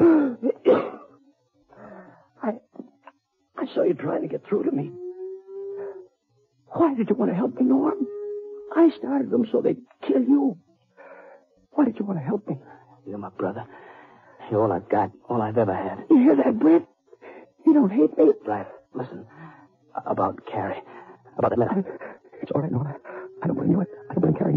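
A time-stretched section runs from 21.16 s to the end of the audio at 24.57 s, where the material plays about 1.85 times faster while its pitch stays put, so it sounds rushed. This likely comes from software squeezing that stretch to fit a shorter length by dropping short pieces. On a spectrogram, the bands keep their frequencies but events crowd together in time, and the waveform shows small seams where segments were joined.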